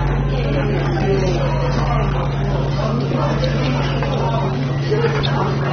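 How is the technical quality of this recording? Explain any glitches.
The technical quality is poor: heavy AAC compression damage runs through the whole clip. Nothing is left above 6.3 kHz, so the top octaves are gone and the sound is dull. The likely cause is AAC-LC encoding at a low bitrate, which fits roughly 27 kbps. Starved of bits, the encoder drops the high band entirely and quantises what remains so coarsely that parts of the spectrum thin out or smear. Plain low-pass filtering would only make the sound duller. What marks this as a codec fault is the added warbling, fizzy grain that shifts from frame to frame on the sustained parts.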